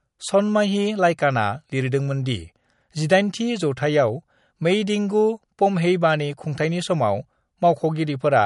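Throughout the speech, the treble stops dead at 11.1 kHz, and a watery, swirling quality is plainly audible, likely from MP3 compression at a bitrate that fits 48 kbps. A spectrogram shows a flat ceiling at that frequency, with weak components flickering on and off in patches below it.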